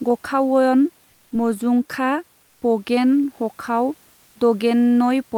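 At 2.43 to 2.61 s, just after "गखावयन मजुंखा", and again at 4.13 to 4.35 s, the room noise in the pauses gives way to comfort noise in place of the background for 180 ms and 220 ms, about 1 dB quieter, a steady featureless hiss. The likely cause is Opus discontinuous transmission filling the gaps with synthetic noise. On a spectrogram the textured background turns into a smooth, uniform band; the waveform envelope goes flat.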